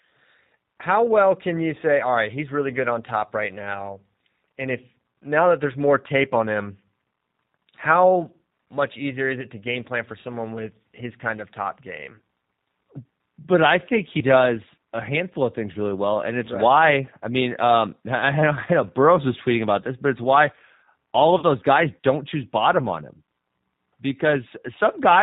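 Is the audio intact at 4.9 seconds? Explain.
No. At 4.9 seconds, as throughout, the speech sounds rough, synthetic and dull, with nothing above 4 kHz, the sound of the G.729 codec rebuilding speech from a vocal tract filter and sparse pulses, which fits an 8 kbit/s stream.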